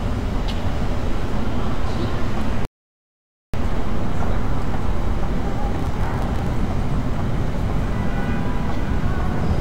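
At 2.65 s there's a rebuffering stall: the player ran dry of downloaded audio and just stopped, leaving silence until 3.54 s. Then it picks up exactly where it left off, so nothing's missing, but about 0.89 s of dead air gets added.

From 5.75 to 6.47 s you get processor overload crackle. The CPU kept missing its deadlines, dozens in a row, and each late buffer was simply skipped. The tiny gaps pile into a gritty tearing over the sound, which fits very short buffers of roughly a millisecond and a half.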